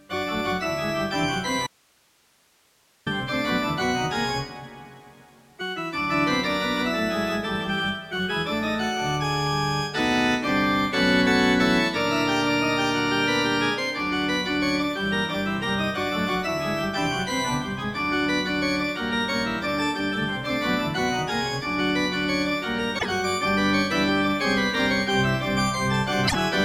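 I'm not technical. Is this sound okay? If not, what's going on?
No. From 1.67 to 3.06 s there's an audio dropout to a faint residue: the signal likely vanished while the line stayed open, leaving about 1.4 s of quiet hiss.

Damaged data in a compressed stream at 22.95 and 26.24 s made the decoder lose its place, so you hear a brief glitch each time.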